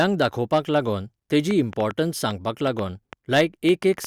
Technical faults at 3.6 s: train of clicks; hard clipping

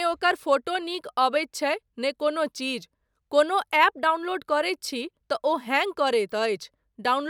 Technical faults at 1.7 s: dropped samples

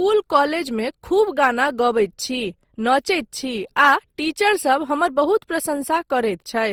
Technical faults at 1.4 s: generation loss

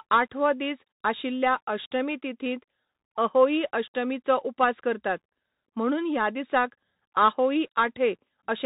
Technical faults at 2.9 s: Bluetooth CVSD headset codec

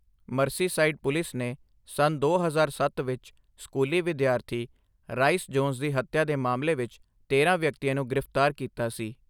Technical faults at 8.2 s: none

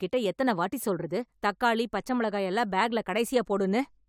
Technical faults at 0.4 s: none

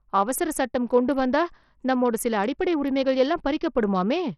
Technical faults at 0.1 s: Bluetooth SBC compression

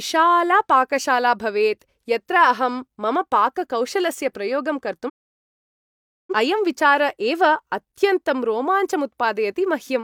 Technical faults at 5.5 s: digital broadcast dropout

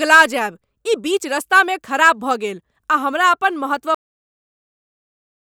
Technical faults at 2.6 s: none

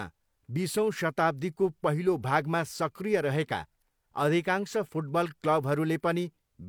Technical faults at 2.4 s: none

